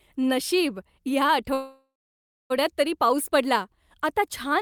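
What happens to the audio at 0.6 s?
Nothing goes wrong at 0.6 s; the speech runs on intact through that moment.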